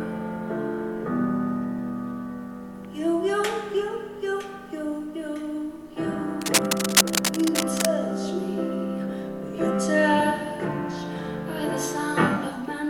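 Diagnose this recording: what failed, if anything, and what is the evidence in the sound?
From 6.41 s to 7.85 s, dense, uneven scratching bursts ride over the sound for about 1.4 s, at roughly the same level as the sound itself. This is cable scratch noise in the analogue wiring. The likely cause is a worn cable, connector or control carrying DC being moved, so its contact resistance jumps rapidly.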